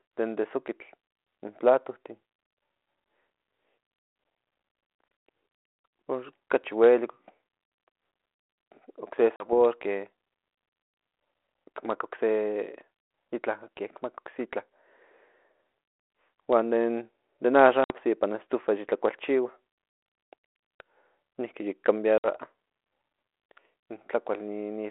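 Packet loss on an ADPCM call hits at 9.36 s (about 40 ms), 17.84 s and 22.18 s after "niki yik" (about 60 ms each). Each is a hard-edged silent gap. The decoder's predictor and step size lose track, so speech resumes with brief, slight distortion.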